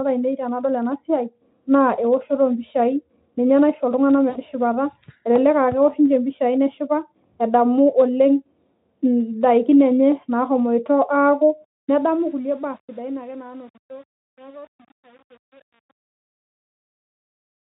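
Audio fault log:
4.29–4.37 s, VoIP packet loss concealed by the speech codec: About 60 ms of audio is missing, which fits three consecutive 20 ms frames. Instead of a gap, the decoder stretches the last pitch period and spectral envelope it received and lowers the gain frame by frame, producing a brief buzzy tone or coloured noise that fades. Because each concealed frame is built on the previous one, the sound stays weak or distorted just after packets resume.
11.64–17.63 s, truncation distortion on a fade: The fade-out, which starts around 11.6 s and ends at 17.6 s, is handled by a gain stage that drops low-order bits without dither. The grit fits roughly 8-bit resolution. From about 12.45 s to the end, the falling level approaches the smallest quantisation step, so the waveform collapses into a few square steps. The tail sounds gritty instead of thinning out cleanly.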